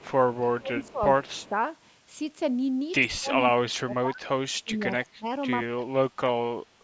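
Speech recorded through a call path shows speech suppressed in double talk at 0.00–0.06, 0.28–1.01, 1.20–1.54, 3.07–4.24, 4.62–5.26 and 5.73–6.36 s. The level dips by roughly 15 to 35 dB, deepest in the last span, most likely because the echo canceller ducked the near talker while the far side spoke. Echo leak appears at 0.83–0.92 and 1.35–1.49 s as a faint copy about 30 dB down, trailing by 104 ms, likely from loudspeaker pickup the canceller failed to remove.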